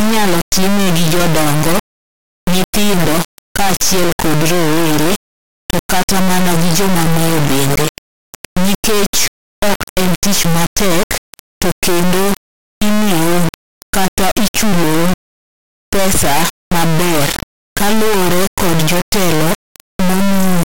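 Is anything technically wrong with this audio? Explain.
Yes. An integer read as float fault runs through the whole clip. The speech was stored as 32-bit integer samples but decoded as 32-bit float. Each integer bit pattern becomes a meaningless float value. Most land near zero or far beyond full scale. The output slams between silence and the clipping limit. It sounds like an extremely loud, harsh square-wave buzz. It drops out to silence in the quietest passages.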